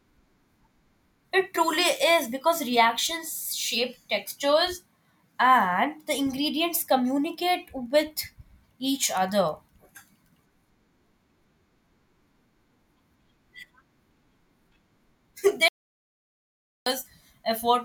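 Near the end, at 15.68 s, the speech cuts out abruptly and stays gone until 16.86 s, a gap of about 1.18 s. That's an audio dropout to silence: the gap is silent, with no room tone or hiss underneath, so it feels like someone yanked the cable rather than the talker pausing. The likely cause is the input dropping out briefly while the recorder kept writing empty samples. Whatever was said in that second-plus is lost.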